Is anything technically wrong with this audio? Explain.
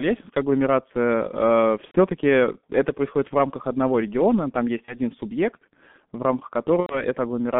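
Yes, two things. The whole clip has gone through a G.723.1 codec, heavily degraded. The band runs only from about 150 Hz to 3.5 kHz, and the coarse, slow-updating voice model leaves the speech muffled and hoarse with smeared consonants. That fits a 6.3 kbit/s G.723.1 stream.

There's also VoIP packet loss concealed by the speech codec, at 1.85–1.97 s, 4.85–4.99 s and 6.80–7.05 s. The decoder papered over the gaps by repeating its last pitch and filter at falling gain, so you hear buzzy or noisy, fading smears. The first and last gaps fit about 90 ms lost, the middle one about 30 ms.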